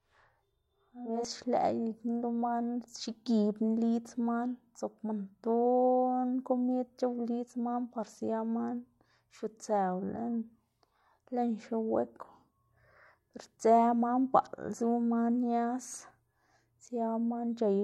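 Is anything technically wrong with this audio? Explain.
Yes. Channel delay (doubling) from 0.0 to 1.25 s: one channel runs 40 ms late, and when the two are summed to mono, the late copy lands as a separate second arrival at equal level, so the speech sounds doubled, with a short slapback trailing each sound.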